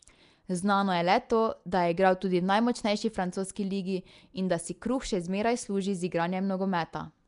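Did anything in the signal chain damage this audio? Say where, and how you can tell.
Yes, at the codec stage: a rough, hissy halo and smeared, underwater sound run throughout, with nothing above 10.6 kHz. That's likely Nellymoser compression filling bit-starved bands with noise.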